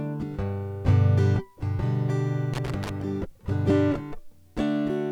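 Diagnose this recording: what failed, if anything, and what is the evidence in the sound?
Loose connector crackle, from 2.54 s to 2.90 s, lasting about 0.36 s, points to a failure in the analogue wiring. The music breaks into an irregular burst of scratching and crackle there. A worn or dirty contact was rapidly losing and regaining connection as it shifted, chopping the signal on and off. Any DC sitting on the line would add pops at those breaks.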